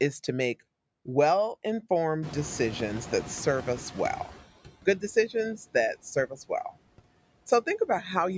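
Noise suppressor artifacts run through the whole speech recording: the suppressor pulls steady background down by about 20 dB frame by frame, so the leftover noise dips between phrases and swells under them. Around 2 s the room noise jumps by roughly 21 dB, and the noise suppressor is slow catching up. From 2.22 to 4.43 s its estimate lags for about 2.2 s, letting the louder noise through with only about 13 dB of cut before it settles. After "decisions that", speech is cut by the noise suppressor between 6.27 and 6.51 s. The suppressor mistakes quiet speech for background and drops it by up to about 18 dB, leaving roughly a tenth of a second sounding swallowed.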